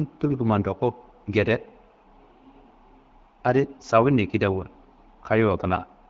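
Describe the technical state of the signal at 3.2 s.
At 3.2 s the speech is intact, with no fault in the signal, carried by the AMR wideband (HD Voice) codec at 12.65 kbit/s.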